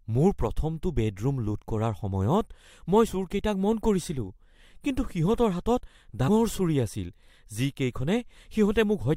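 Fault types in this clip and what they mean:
Compressed frames skipped: at 6.27 s the speech jumps ahead roughly 70 ms, about three 23.2 ms frames.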